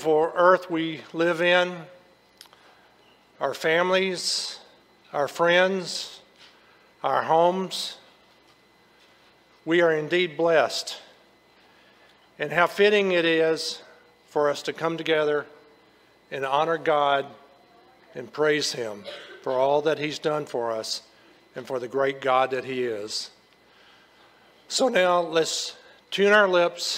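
No technical faults can be heard anywhere in this recording.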